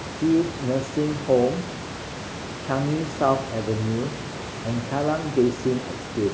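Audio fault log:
No fault in this audio.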